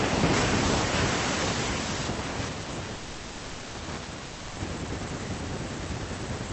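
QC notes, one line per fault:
2.95 to 3.76 s, call audio freeze: the sound stalls for about 0.79 s, filled by the last bit stretched into a fading buzz, never dropping to silence. Then it picks up right where it stopped, so nothing's lost, just a gap pushed in. Likely held-up packets draining the jitter buffer.
4.26 to 4.58 s, long network dropout: 0.3 s gets papered over by a decaying buzz that doesn't go fully silent, and when the sound resumes that stretch is simply gone rather than delayed. Likely a burst of packets that never made it through.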